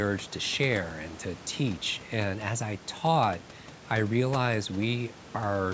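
No technical faults can be heard anywhere in the speech. The call microphone processing leaves nothing above 8 kHz, and the room noise sits about 21 dB below the speech.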